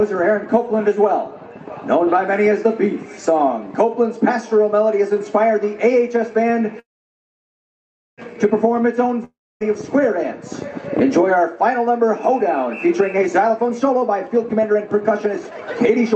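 From 6.79 to 8.20 s the sound trails off into a brief fading buzz, then about 1.3 s of silence, before resuming exactly where it stopped. This is likely a call audio freeze: delayed packets emptied the jitter buffer, inserting a gap without losing anything.

From 9.25 to 9.62 s a similar short buzz decays into roughly 0.27 s of silence. When the sound returns, about 0.36 s of it is gone. The cause is likely a long network dropout in which that audio never arrived.

From 12.96 to 16.14 s the sound runs hurried, at about 123% of normal speed with unchanged pitch. This is a jitter buffer speed-up: to shrink excess delay, the receiver repeatedly cut pitch-period slices, removing roughly 0.7 s in total. Throughout, the Opus call path limits the top end to about 8 kHz.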